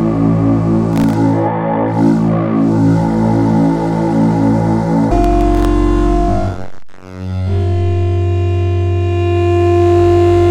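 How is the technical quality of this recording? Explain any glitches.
The recording has two short bursts of processor overload crackle, from 0.93 to 1.15 s and again from 5.24 to 5.65 s. The processor couldn't keep up, so it kept missing the deadline for very short buffers, each well under a millisecond, and filled each miss with silence. Around fifteen dropouts in the first burst and about ten in the second, all with hard edges, pile up into a gritty tearing over the sound that stops once the load eases.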